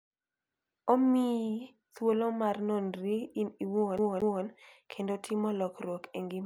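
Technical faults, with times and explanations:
3.98–4.43 s, CD stuck on one turn: after "mar nonri in iwuon", a 0.23 s loop repeats twice with brief mutes, as the laser jumps back each rotation, before "kendo timo".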